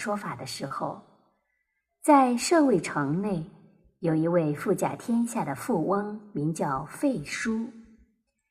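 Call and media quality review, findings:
Clock drift between sender and receiver, whole clip: sender clock running roughly 3% slow against the receiver. Jitter buffer keeps draining, so the receiver repeatedly stretches or repeats short slices. Audible as irregular small timing hiccups throughout. The timing corrections below follow from it.

Short stall from a late packet, 0.67–0.72 s and 3.96–4.02 s. Packet missed its playout slot and the jitter buffer ran empty. Receiver held the last sound for 30 ms, then 40 ms, and resumed in place. Nothing lost. Brief held sound with a faint buzz or dip. Delay grew by 30 and 40 ms.

Repeated timing corrections, 1.55–3.01 s and 5.13–8.49 s. Receiver-side playout adjustment repeating short pieces to keep pace with the slow sender. Effective speed 97%. Roughly 50 ms added in the first stretch and roughly 100 ms in the second. Edits run one direction at uneven spacing, heard, if at all, as slight hiccups and an unsteady, dragging tempo.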